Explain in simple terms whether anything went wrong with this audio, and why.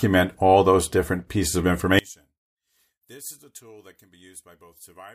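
Yes, something went wrong. Right after "those different pieces of", at 1.99 s, the speech suddenly drops almost to nothing and stays faint until the end. This is likely one channel inverted: one stereo side is flipped, so the shared sound cancels when both sides are combined.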